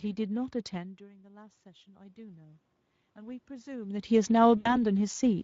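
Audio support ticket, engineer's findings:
Speex codec damage throughout: hoarse, noisy speech with noise-like fill above 4 kHz, suggesting a mid-rate mode near 17 kbps. Spectrogram shows smeared, grainy upper band lacking harmonic detail.

Automatic gain rising, 0.74 to 4.18 s: gain climbs about 9 dB after input dropped about 22 dB when the talker moved back near 1 s. Waveform envelope and room-noise floor rise together gradually.

VoIP packet loss concealed by the speech codec, 4.57 to 4.83 s: about 80 ms lost, consistent with four 20 ms frames. Decoder extrapolates from last pitch and filter, gain lowered frame by frame. Spectrogram shows extrapolated energy decaying, with weak recovery afterward.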